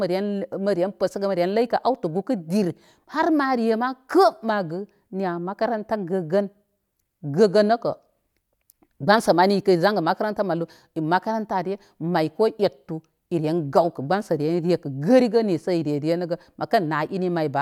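No technical faults can be heard anywhere in the speech. Nothing in the recording calls for a timestamp or a fix.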